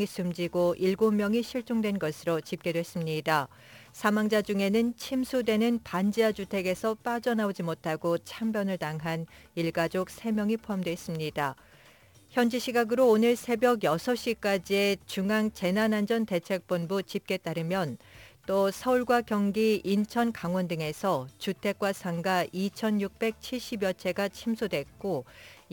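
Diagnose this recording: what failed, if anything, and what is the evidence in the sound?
Converter stage: sample clock jitter throughout. Roughness rises with loud, bright passages. Sampling times wander about 10 microseconds, leaving error about 25 dB below the signal.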